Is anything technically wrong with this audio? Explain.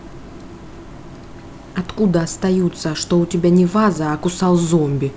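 No, nothing's technically wrong here; it's speech that came through a call link, and the top end stopping at about 8 kHz is just what a wideband call codec like G.722 does.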